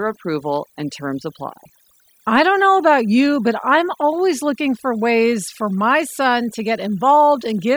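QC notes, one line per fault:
throughout, overdone noise removal: the noise reduction on this speech was set far too aggressively, so any frequency band sitting near the noise estimate is pulled deep down or gated off entirely. The background drops and breaks up into isolated twinkling specks where single bands flicker on and off, and the quieter components of the voice are stripped along with the noise.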